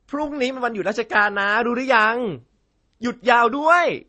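From start to finish, nothing sounds above 9.6 kHz. Two sets of artefacts overlap: a watery, swirling smear and a grainy roughness. This is likely transcoding between lossy codecs. The sound points to a low-rate MP3 re-encoded with Opus, which spends bits on the MP3's flaws and adds its own.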